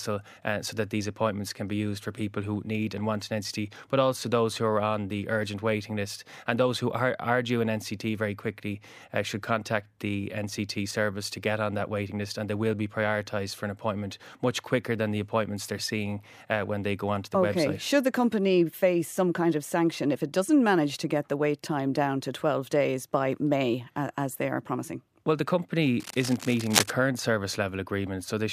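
From 25.99 to 26.91 s, cable scratch noise rasps over the speech, nearly as loud as the voice itself. It is likely caused by a worn cable or connector shifting and changing its contact resistance. On a spectrogram it shows as dense, broadband vertical streaks; the waveform looks ragged and spiky.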